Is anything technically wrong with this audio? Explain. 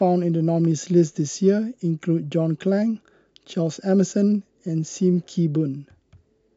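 No, nothing technically wrong turns up anywhere in this speech recording, so there's nothing here to flag.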